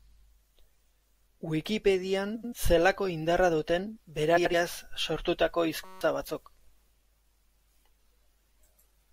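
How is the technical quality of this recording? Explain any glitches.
The recording has three glitches, two of one kind and one of another.

At 2.35 to 2.53 s and again at 4.37 to 4.54 s, there are frames out of order. Two neighbouring chunks of about 85 ms each got swapped in transit and decoded that way, so the stretch plays with its halves exchanged. You hear a garbled flutter, but no time goes missing.

From 5.85 to 6.01 s, there's a system hang loop. The machine froze while the audio hardware kept replaying the same 5.33 ms slice, which fits a 256-sample buffer, about thirty times. It comes out as a steady 188 Hz buzz, and roughly 150 ms of real audio is lost under it.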